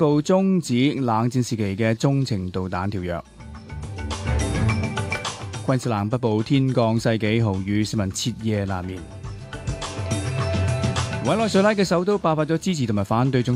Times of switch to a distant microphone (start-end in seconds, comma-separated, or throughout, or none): none